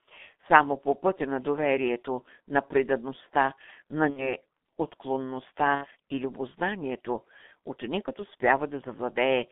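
Throughout, the speech passes through the G.723.1 codec, a slow-updating low-rate coder whose heavy damage fits about 6 kbit/s. The line is cut to roughly 150 Hz to 3.6 kHz, so the voice is muffled and hoarse, with smeared consonants.

From 4.10 to 4.34 s, just after "доверието на предадността на", VoIP packet loss concealed by the speech codec leaves a gap of about 60 ms, which fits two lost 30 ms frames. The decoder extends the last pitch and filter at falling gain, so the voice is stretched into a buzzy tone or coloured noise that fades, and it stays weak briefly after packets return. A second loss of the same size, from 5.75 to 5.86 s, just before "и любознанието ученикът", causes the same fading concealment.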